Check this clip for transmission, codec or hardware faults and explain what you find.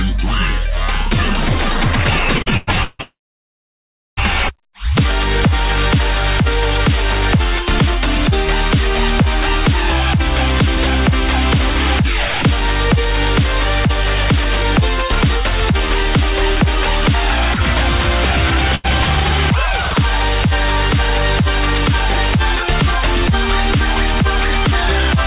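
Four faults can be heard, all of them jitter-buffer problems on a call link. The band stops at 4 kHz, which fits a G.711 A-law path at 64 kbps.

Repeated stalls (stutter) run from 2.38 to 3.01 s. The packet flow ran dry five times. Each time the receiver carried the last sound on until more data came. The longest hold is about 160 ms. About 53% of that stretch is filled-in sound. Nothing is lost. The audio catches and drags, like a skipping line.

A call audio freeze follows straight on, from 3.01 to 4.19 s. The sound holds briefly, then drops out. About 1.04 s of that is silence. In total about 1.16 s is inserted. The audio then resumes exactly where it stopped, now running later than before. The likely cause is packets held up in transit while the jitter buffer sat empty. Nothing is missing. A hole has simply opened in the timeline.

A jitter buffer speed-up runs from 10.77 to 16.82 s. 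The buffer held more audio than it wanted. To trim the backlog, the receiver cut out many tiny slices, each one or a few pitch periods long. About a tenth of a second went in total. Playback runs at 101% speed with the pitch unchanged. That is too small a speed-up to sound hurried.

A short stall from a late packet sits at 18.75 to 18.86 s. One packet missed its slot. The receiver stretched the previous sound for about 88 ms until it arrived. It then carried on from the same point. No audio is lost. One sound lingers slightly too long, with a small buzz or dip in level.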